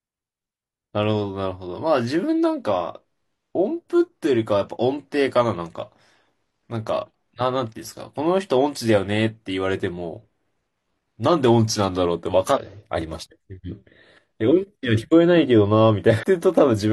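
At 12.52 to 12.58 s and again at 16.19 to 16.25 s, the speech is interrupted by a brief burst of damaged data in a compressed stream, each about 60 ms long. Corrupted bytes leave the decoder unable to read those frames properly, so it loses sync until it finds a valid frame header. What comes out is a short chirp, squawk, click or hole. A simple dropout would leave silence or a smoothed gap, and a single click would be far shorter.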